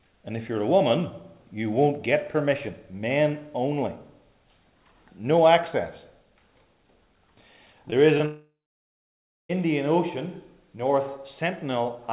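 Short concealed packet loss occurs at 7.90 s and again at 8.18 s. Each time about 20 ms of audio failed to arrive, and the receiver papered over the gap by extending the preceding sound, heard as a brief smear or wobble lasting roughly 35 to 40 ms.

A long network dropout follows from 8.26 s to 9.51 s, likely caused by the connection stalling so that about 1.24 s of audio never arrived. The last sound is stretched into a fading buzz, then roughly a second of silence, before the audio resumes with that portion gone. The band-limited call path, with nothing above 4 kHz, fits G.711 telephone coding.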